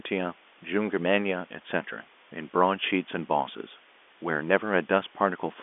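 A steady, even hiss runs throughout, roughly 30 dB below the speech: low bit depth with dither, consistent with about 8-bit rounding. Unlike telephone-line coding noise, it stays level without following the speech.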